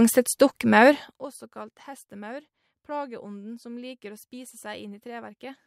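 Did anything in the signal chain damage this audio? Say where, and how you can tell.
No, nothing in the chain left an audible mark on this speech recording: the signal holds together at every stage from capture through to playback, with no sign of damage anywhere along the way.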